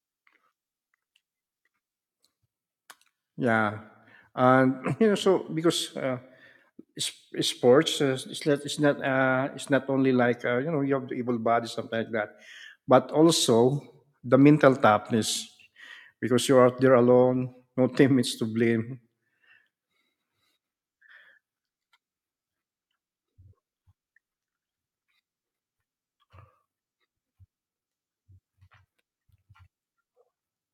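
From 0 to 6.0 s the speech has the sound of an adaptive stream starting at a low bitrate. The treble is dull and partly synthetic, with the swirly, metallic coding artefacts of a spectral-band-replication codec around 40 kbit/s. At 6.0 s the player switches to a higher rendition, which sounds like plain AAC near 96 kbit/s, and full, natural high end returns. Unlike a rebuffer or dropout, the change happens at once with no gap or stall, and the quality only improves.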